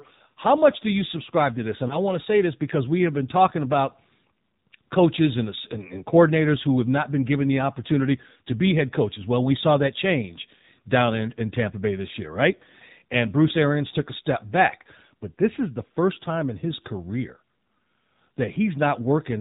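From start to finish the speech is boxed-in and buzzy, with nothing above 4 kHz and a clearly synthetic edge. This is the AMR narrowband mobile codec at work: 8 kHz sampling and a pulse-driven vocal tract model, with damage at a level that fits a low 7.4 kbps mode.

Between 1.88 and 2.00 s, just before "to say this because", the sound briefly dips and warbles, then recovers rough for a moment. These are lost AMR speech frames, in this case what sounds like a single 20 ms frame: the decoder filled the gap by repeating the last good pitch and vocal tract settings at reduced gain.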